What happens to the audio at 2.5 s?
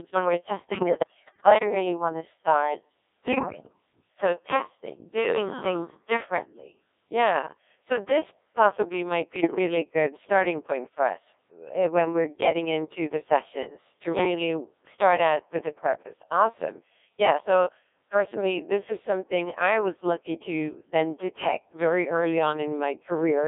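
At 2.5 s the Codec 2 vocoder is at work, as across the whole clip: speech is rebuilt from pitch and envelope, sounding robotic and buzzy within 300 Hz to 3.6 kHz, which fits about 1.6 kbit/s.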